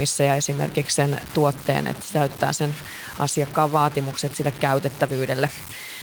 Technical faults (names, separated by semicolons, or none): low bit depth without dither